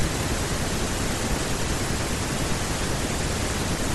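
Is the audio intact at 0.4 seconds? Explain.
No. At 0.4 seconds, as throughout the speech, the sound is watery and swirly with a dulled top end. This is likely MP3 compression at a bitrate near 64 kbps: starved of bits, the encoder cuts the treble and lets weak frequency lines flicker between frames.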